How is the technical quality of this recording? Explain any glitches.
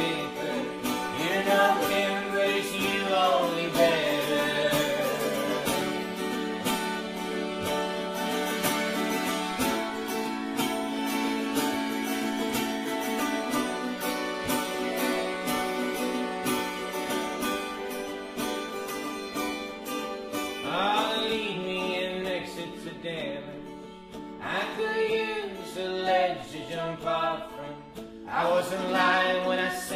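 Two brief glitches, at 3.75 s and 5.81 s. Each is a small forward jump in the sound, a few milliseconds missing and the two sides butted together. The likely cause is a dropped buffer (overrun), where hardware overwrote samples before the software read them, with no silence inserted.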